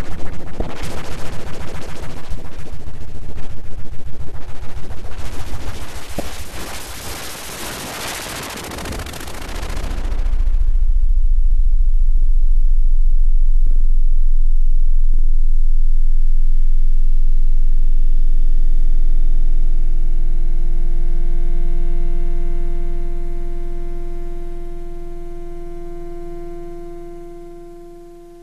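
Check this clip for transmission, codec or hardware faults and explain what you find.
Two short faults of the same kind are present, both damaged data in a compressed stream. They occur at 0.58 to 0.61 s and at 6.17 to 6.20 s, each lasting about 33 ms. In both places the encoded bytes are corrupt, so the decoder misreads or rejects those frames, loses sync, and searches for the next valid frame header before resuming. Each event comes through as a brief chirp or blip cutting across the sound.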